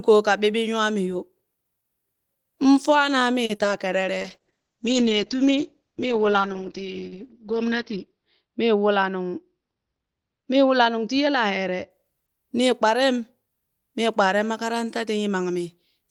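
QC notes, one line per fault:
3.45–3.51 s, short stall from a late packet: a packet arrived late and the jitter buffer ran dry, so the receiver stretched the preceding sound for 40 ms, then resumed where it left off. Nothing is lost, but the sound hangs slightly with a faint buzz, and playback sits 40 ms later afterwards.
3.55–3.61 s and 3.63–3.66 s, short concealed packet loss: two bursts of audio, 40 ms and then 20 ms, never reached the decoder. The receiver extrapolated the last sound to cover 40 ms and 10 ms respectively, giving a quick smear or wobble, and part of the second gap simply drops out.
4.22–11.96 s, call bitrate drop: the bandwidth estimate fell and the encoder went from 32 to 8 kbps, holding the lowest rate for about 4 s. Coarser coding makes the sound rough and watery, and the audio band shrinks from 20 kHz to 6 kHz, so it turns muffled.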